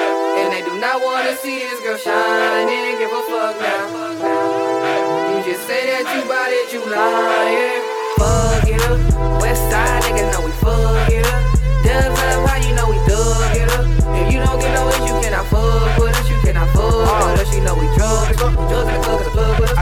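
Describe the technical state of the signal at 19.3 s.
At 19.3 s the sound is rushed, racing at about 1.9 times its normal pace while the pitch stays put. This time-stretched section runs from 18.14 s to the end, likely from software squeezing the audio by discarding short slices to shorten it.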